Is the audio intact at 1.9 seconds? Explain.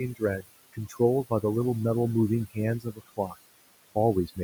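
No. At 1.9 seconds the speech is affected by two faults that run through the whole clip.

The first is overdone noise removal. The noise reduction is set far too aggressively. Any frequency band close to its noise estimate gets pushed down hard or switched off. Soft parts of the voice fall under that threshold too, so they vanish along with the noise. The background drops and breaks up into twinkling specks.

The second is noise suppressor artifacts. The suppressor decides frame by frame which bands hold steady noise and lowers them, here by about 19 dB. The room noise, which sits about 17 dB below the speech, is pulled down in the gaps and swells back under the voice.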